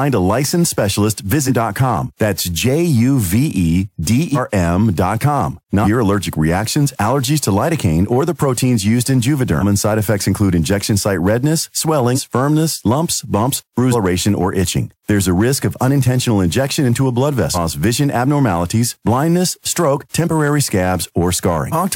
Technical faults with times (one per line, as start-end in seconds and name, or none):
0.00-21.95 hard clipping
1.46-1.51 compressed frames skipped
4.34-4.39 compressed frames skipped
5.83-5.87 compressed frames skipped
9.59-9.63 compressed frames skipped
12.15-12.19 compressed frames skipped
13.91-13.95 compressed frames skipped
17.53-17.58 compressed frames skipped
21.71-21.74 compressed frames skipped